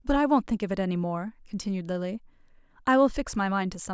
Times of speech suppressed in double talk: none

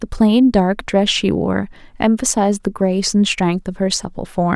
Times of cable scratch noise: none

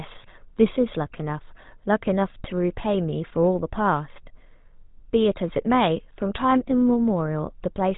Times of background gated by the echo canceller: none

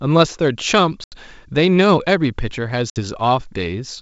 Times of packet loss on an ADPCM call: 1.04-1.16, 2.90-2.98

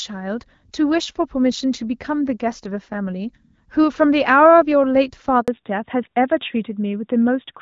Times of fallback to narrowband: 5.48-7.62

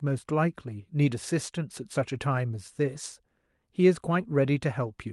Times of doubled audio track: none

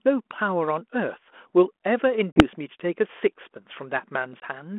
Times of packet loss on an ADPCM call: 2.32-2.43, 4.40-4.45

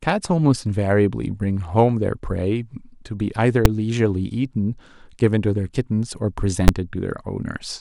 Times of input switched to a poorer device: none

